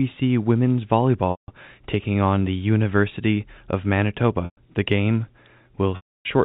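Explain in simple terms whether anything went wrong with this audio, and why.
Three times the speech briefly sticks on a held, buzzy tone that fades into silence before the talking picks back up: at 1.31 s for 0.17 s, just before "taking on the"; at 4.45 s for 0.12 s; and at 5.96 s for 0.29 s. This is packet loss with pitch repetition. Chunks of the audio went missing in transit, and the receiver filled each gap by repeating the last bit of voice, fading it out and then blending the real speech back in.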